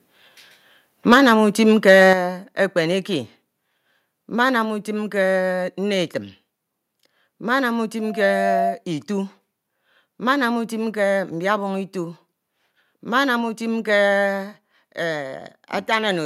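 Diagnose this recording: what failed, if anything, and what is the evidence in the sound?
Microphone overload at the converter: harsh crackle on peaks at 1.12–1.33 s and 1.88–2.13 s, about 6 and 4 dB over full scale. It is likely flat-topped clipping, confined to the loudest moments unlike codec distortion.

Microphone volume stepped down, likely in call processing: at 1.14 s and 2.13 s the whole sound drops by about 4 and 7 dB in one step, the first during a distorted peak and the second just after one, not a gradual fade.

Loudspeaker feedback squeal in the playback-to-microphone loop: from 8.00 to 8.82 s a single 688 Hz tone swells over about half a second to about 5 dB above the signal. Steady hum would not grow like this.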